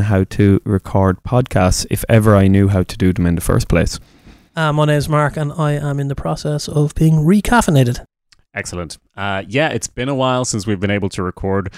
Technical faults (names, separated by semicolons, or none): hard clipping